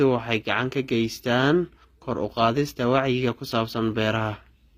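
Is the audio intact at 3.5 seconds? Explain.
No, HE-AAC compression is plainly audible throughout, including 3.5 s: treble likely rebuilt by copying lower bands upward, sounding gritty and metallic, with a spectrogram showing smeared, repeated bands and nothing above 15.5 kHz.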